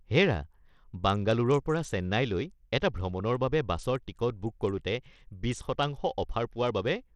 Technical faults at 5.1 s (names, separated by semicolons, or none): Bluetooth SBC compression